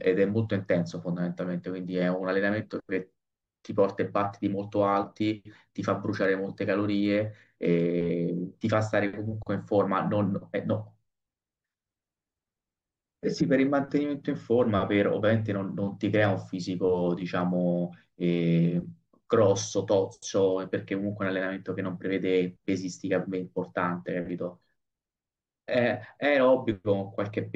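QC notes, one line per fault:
13.40 s, damaged data in the compressed stream: a brief glitch, such as a chirp, squawk, click or short hole, as the decoder misreads corrupt frames and resyncs.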